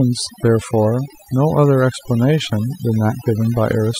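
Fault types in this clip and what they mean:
overdone noise removal: A noise reduction stage was pushed too hard on this speech, so any frequency band sitting close to its noise estimate gets cut deep or muted, and softer parts of the voice are lost along with the noise. Throughout the clip the background drops and is broken by tinkling, twinkling specks. On a spectrogram the gaps between syllables look almost empty, dotted with isolated bright points, and the voiced regions appear patchy and hollowed, with missing low-level detail.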